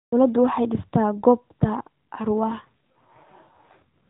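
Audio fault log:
2.48–3.82 s, AMR rate drop: for about 1.3 s the speech turns rougher, buzzier and more synthetic, then clears. The sound points to the mobile link telling the AMR-NB codec to step down from 12.2 to about 5.9 kbit/s, leaving fewer pulses per frame to model the voice. Unlike a dropout or a band switch, there is no gap and the narrowband ceiling below 4 kHz stays the same; only the texture coarsens.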